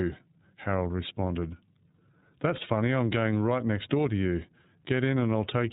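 From start to finish the speech has been through the iLBC codec, a narrowband VoIP coder that handles each 30 ms frame independently, which fits its 13.33 kbps mode. The damage is plainly audible: the speech sounds slightly rough and synthetic, with a dull, telephone-like band limit. On a spectrogram everything above 4 kHz is missing, leaving a hard ceiling.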